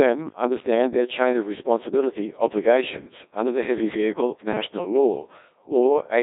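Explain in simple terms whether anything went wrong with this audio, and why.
Something did go wrong, for the whole clip. The speech sounds robotic and buzzy, like a machine imitating a person, and it is thin and muffled, with no crispness or sparkle at all. This is the Codec 2 vocoder, a squeeze system for digital radio. Instead of sending the real sound, it sends only a rough outline (pitch, loudness and tone colour), and the receiver rebuilds speech from simple tones, so the natural detail is lost.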